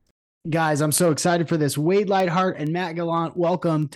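Word clock ticks run from 0.11 s to 3.83 s: around fifteen sharp ticks of uneven strength, roughly every fifth of a second. A receiver free-running against the sender's clock, off by roughly 100 ppm, slips a single sample at each crossing.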